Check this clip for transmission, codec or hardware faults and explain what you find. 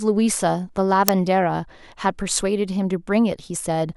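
There's one fault in this speech clip. At 1.08 s, an uninitialised buffer: a block went out before audio was written, so stale memory played as a loud crack lasting about 2.7 ms, which fits a 128-sample buffer.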